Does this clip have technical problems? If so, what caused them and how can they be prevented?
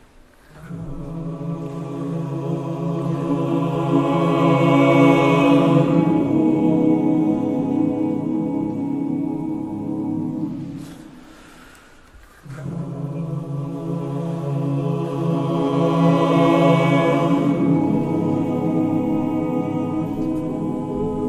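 No, this clip has no technical problems, so there is nothing to prevent.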